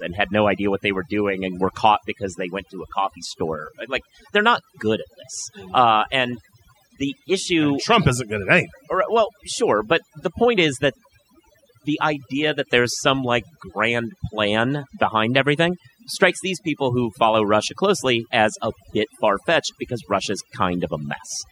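From start to finish, this speech carries overdone noise removal. A noise reducer was pushed too hard, so any frequency band sitting near its noise estimate gets cut deep or gated off, taking the softer parts of the voice along with the noise. The pauses fall to near silence dotted with twinkling specks. On a spectrogram the background shows as scattered isolated dots, and the speech looks patchy.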